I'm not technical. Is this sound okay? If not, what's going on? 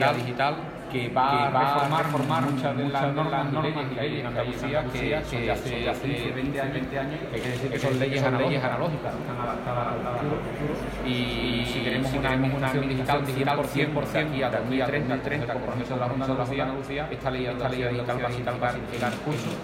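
No. Throughout the clip there is a doubled audio track: every sound is heard twice, the second copy arriving about four tenths of a second later and at roughly the same loudness. It is likely caused by the sound being recorded twice through paths with different delays.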